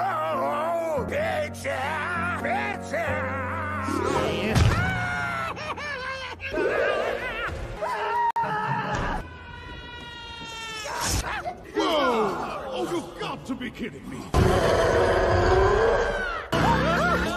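The audio has a gap at a join of encoded pieces, a silence of about 55 ms from 8.31 to 8.36 s. It arises where two separately encoded sections were butted together untrimmed: one encoder's end padding and the next one's start-up delay both remain as dead air. Unlike a dropout from lost data, nothing goes missing. The sound resumes exactly where it halted, and the cut edges are softly smeared by the codec rather than sharply clicking.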